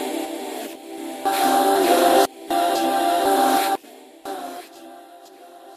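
From 3.68 to 5.19 s the sound falls by roughly 25 dB with zipper noise. The gain moves in unsmoothed steps, around a hundred per second, and each jump leaves a tiny click. This drop carries a fine ticking buzz throughout.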